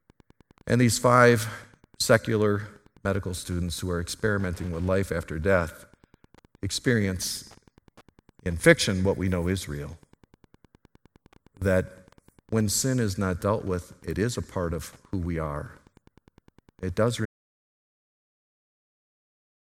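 A faint, steady ticking runs under the speech from start to finish, about ten clicks a second and roughly 30 dB below the voice. This is Wi-Fi interference: a nearby radio's beacon, repeating every 102.4 ms, is being picked up and rectified by the audio circuit.

At 17.26 s the speech cuts off mid-flow into complete silence with no room tone, and it stays silent to the end. This audio dropout to silence was likely caused by the input being lost while the recorder kept writing silence.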